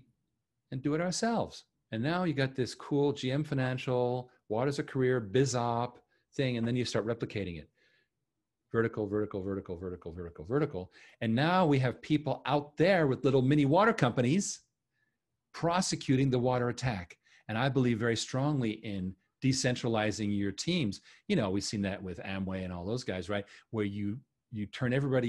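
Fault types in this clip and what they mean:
No faults detected in this speech recording.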